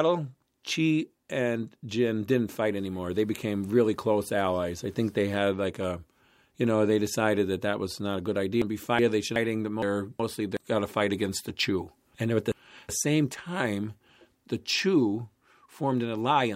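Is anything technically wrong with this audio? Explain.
Yes. Frames out of order at 8.62–9.36 s, 9.82–10.57 s and 12.15–12.89 s: two adjacent blocks of about 0.37 s swap places, so the speech flutters.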